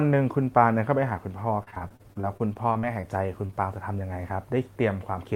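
Repeated packet loss, heard as robotic sound, runs from 1.63 to 3.05 s: fifteen gaps, the longest 36 ms, each patched by extending the preceding sound. With about 22% of that stretch synthesised, the speech turns choppy, with fragments missing.

A short concealed packet loss follows at 3.47 to 3.51 s, where roughly 20 ms of audio arrived too late to decode. The receiver bridged the hole by continuing the last sound and then blending back into the real signal, leaving a brief smear or wobble.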